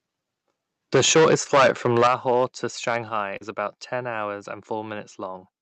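Microphone overload from 0.94 to 2.45 s: the loudest syllables have a harsh, crackling edge. The input level was likely set too high, driving peaks about 13 dB past the converter's ceiling, so roughly a tenth of the samples have their tops sheared flat.

Microphone volume stepped down at 0.96 s: the level falls about 2 dB in one step, just as the distortion begins, with voice and background dropping together. This is likely the call software reacting to the overloaded input by lowering the device's input volume.

Short concealed packet loss from 1.43 to 1.47 s: about 20 ms of audio never arrived in time. The receiver filled the gap by extending the preceding sound and then blending back into the real signal, which produces a brief smear in the middle of the overloaded stretch.

Microphone volume stepped down at 2.07 s: a sharper drop of about 8 dB, again likely an automatic gain cut in response to the sustained clipping.

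Microphone overload from 2.87 to 2.97 s: a milder, brief recurrence of the crackle, with peaks about 3 dB over the limit and only a small share of samples flattened, likely from the input still running hot.

Microphone volume stepped down at 3.09 s: a further step of about 5 dB, likely another automatic correction after that peak.

Short concealed packet loss from 3.37 to 3.43 s, just before "about ten hours": a 40 ms hole, about 33 ms of which was filled by continuing the last sound. This gives a short wobble just ahead of that phrase. Throughout, the audio has the 8 kHz bandwidth of the Opus call path at 48 kbps.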